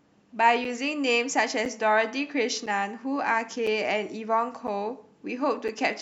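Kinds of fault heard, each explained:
Gap between chunks: the speech comes in one-second pieces with a 7 ms silence at each join, giving little holes every second from 0.65 s.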